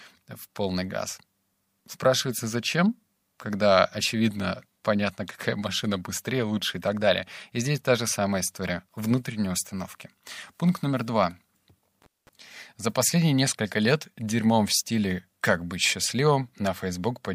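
A speech clip with one intermittent contact fault, from 12.02 to 12.29 s. A loose plug or cable briefly loses its connection, so the signal path opens for about 0.21 s and the sound cuts out, with crackle as the contact breaks and remakes. That ragged, crackling edge is what sets it apart from a digital dropout, such as packet loss, where the gap starts and ends cleanly without mechanical noise around it.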